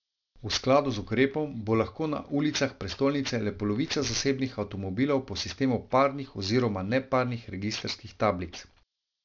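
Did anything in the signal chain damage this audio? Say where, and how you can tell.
Yes, at the sample-rate conversion stage. Aliasing runs through the whole clip: sibilants come out gritty and metallic, and the spectrum slams into a hard edge at 6 kHz. That fits a drop from 48 kHz to 12 kHz with no anti-alias filter, so everything above folded back down, fairly strong against the speech.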